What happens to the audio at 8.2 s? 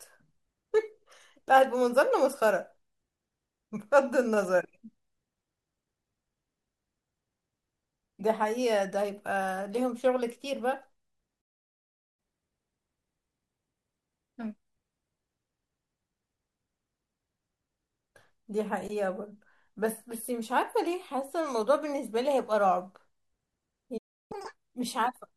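Nothing goes wrong at 8.2 s; the speech continues intact through that point, with no dropout, click, distortion or other audible fault.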